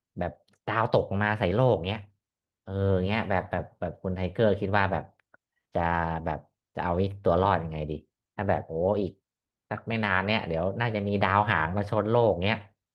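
No technical faults can be heard anywhere in this speech recording. At no moment does anything in the sound go wrong.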